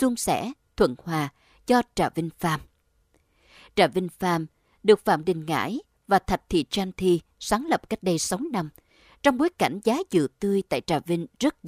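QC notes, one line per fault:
No technical faults can be heard anywhere in the speech signal.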